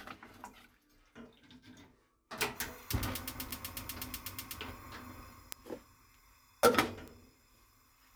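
Three isolated ticks land at 3.51, 5.52 and 7.08 s, classic bit error spikes: a single flipped bit throws one sample off by a power of two, then it snaps back. They're broadband and unrelated to the audio, peaking around -23, -11 and -29 dBFS.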